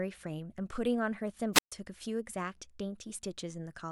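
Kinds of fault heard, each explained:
Wireless microphone squelch dropout: the FM radio link from the microphone weakens far enough that the receiver's squelch cuts the output, so between 1.53 and 1.72 s the speech breaks into a short burst of hiss, a muted gap of about 131 ms, then resumes.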